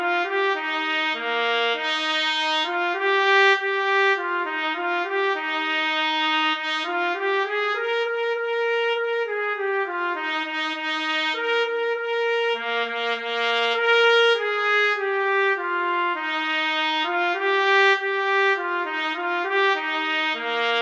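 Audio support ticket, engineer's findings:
No faults found.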